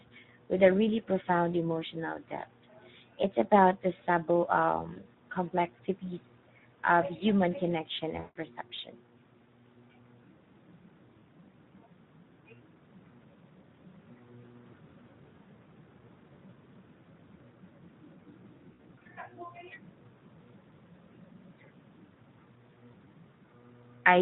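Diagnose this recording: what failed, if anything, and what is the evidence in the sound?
Codec stage: the speech was squeezed through Speex at a low rate, which fits about 11 kbps, leaving too few bits for excitation, so the whole clip sounds plainly hoarse and noisy.

Network stage: VoIP packet loss concealed by the speech codec at 4.93–5.05 s, 8.19–8.37 s and 18.74–19.07 s. The decoder stretched its last pitch and filter into a fading buzzy tone or coloured noise, and the sound stays weak briefly afterwards.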